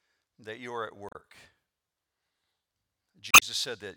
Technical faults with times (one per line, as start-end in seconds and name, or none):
1.09-1.15 damaged data in a compressed stream
3.31-3.43 damaged data in a compressed stream